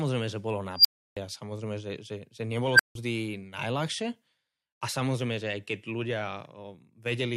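Unstable filter, at 0.77 to 1.17 s and 2.72 to 2.95 s: a recursive filter's feedback runs away, so a tone near 5 kHz, then near 1.5 kHz, swells into clipping within about 82 and 70 ms. Overflow then cuts the speech to silence for 320 and 160 ms.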